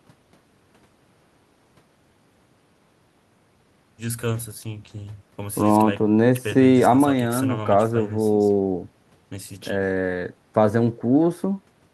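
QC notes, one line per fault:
No fault to note.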